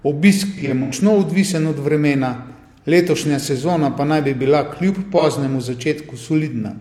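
In this speech clip, a smeared, phasey patch runs from 0.57 to 0.92 s, with dropouts totalling about 171 ms scattered across 341 ms, the longest lasting about a tenth of a second. At 5.18 to 5.23 s there is a brief 43 ms blur. Both come from AAC frame loss with concealment: the decoder patched each gap by recycling the last good spectrum.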